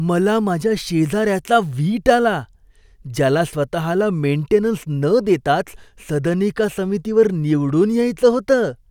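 Nothing goes wrong anywhere in this bit of speech, so there's no technical fault to point to at any moment.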